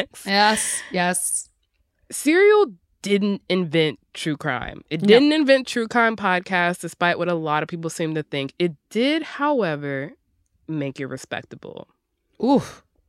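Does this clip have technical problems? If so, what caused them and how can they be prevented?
No, the speech signal shows no technical faults that need a cause or a fix.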